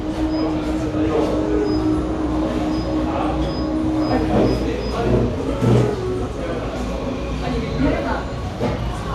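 No technical faults can be heard anywhere in this recording of sounds.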